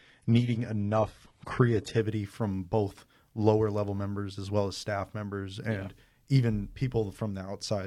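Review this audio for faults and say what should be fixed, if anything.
Adaptive stream starting at a low bitrate, 0 to 2.0 s: treble above 11.8 kHz is missing, consistent with HE-AAC near 16 kbit/s, until quality jumps cleanly before "from both lower level". Prevent it by starting playback on a higher-bitrate rendition, or by buffering briefly until the connection is measured.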